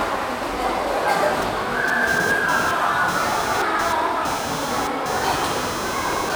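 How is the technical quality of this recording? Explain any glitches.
The recording is marred by one continuous fault. Computer activity noise, from 1.42 s to the end: processor or peripheral load disturbs the shared audio ground, adding a buzz pulsing roughly 300 times a second, fairly loud against the sound.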